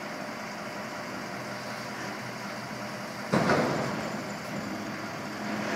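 No technical faults can be heard anywhere in this clip.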